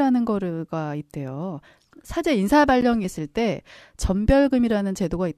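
At 2.81 s the speech drops out for about 11.5 ms, a short hole with abrupt edges on both sides, heard as a brief tick of silence. This is a gap between stream segments: the time stamps at the join of two segments don't quite meet, so the player pads the space with silence. Nothing is cut from the audio. The clip simply runs 11.5 ms longer, with a dead spot at the seam.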